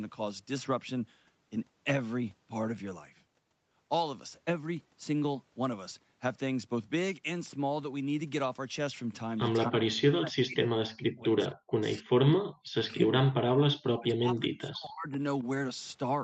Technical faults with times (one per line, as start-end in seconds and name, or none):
9.69-11.37 speech suppressed in double talk
11.65-11.71 background gated by the echo canceller
11.99-13.15 speech suppressed in double talk
13.97-15.17 speech suppressed in double talk
15.39-15.44 echo leak